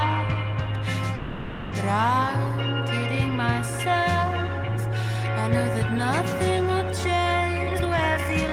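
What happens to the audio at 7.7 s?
From 7.70 s to the end at 8.53 s a jitter buffer speed-up sets in. The receiver trims its backlog by cutting short pitch-period slices again and again, about half a second in total, so the audio plays at 155% speed with unchanged pitch and sounds rushed.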